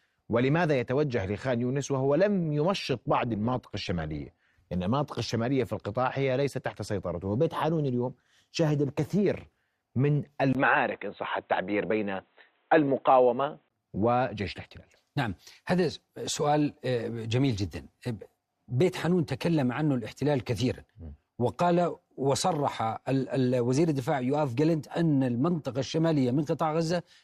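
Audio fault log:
2.69–4.69 s, adaptive stream at a lower bitrate: the quality drops suddenly with no gap and codec artefacts rise, then recovers at 4.69 s. This fits the stream switching to a lower-bitrate version, around 16 kbit/s instead of 64 kbit/s, while the connection slowed.
10.53–13.70 s, input switched to a poorer device: after a 20 ms silence, the band cuts off at 4 kHz and a new noise floor appears well below the speech, with the level roughly unchanged. The likely cause is a change to a narrower-band microphone or headset profile.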